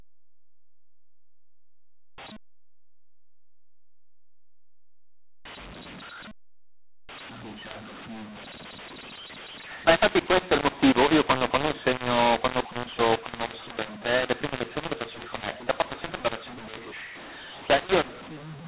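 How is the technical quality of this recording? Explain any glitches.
The recording is seriously degraded by a mu-law and A-law mix-up that runs through the whole clip, layered on a telephone channel whose band stops at 4 kHz, which fits standard G.711 coding at 8 kHz.

Throughout, speech coded with mu-law is being decoded as A-law. Because the two logarithmic curves assign different levels to the same 8-bit code, amplitudes are remapped: some peaks are exaggerated, others shrunk, and near-silent samples jump well above zero. The result is harsh, gritty speech, with pauses filled by noise. A waveform shows a raised noise floor where gaps should be flat, and a spectrogram shows broadband haze filling the band up to 4 kHz.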